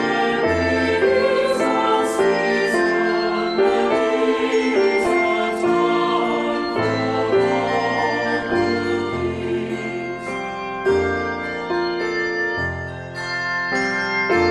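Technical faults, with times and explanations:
5.04–5.14 s and 8.32–8.54 s: DAB burbling. Two brief bursts of burbling sit over the audio, the second about twice as long. Weak reception left residual bit errors, around 0.4 to 0.5 percent, that got past error correction into the MP2 stream. Corrupted samples put short blips of noise in single sub-bands, and corrupted scale factors make sub-bands jump in level for up to a frame, producing the burbling.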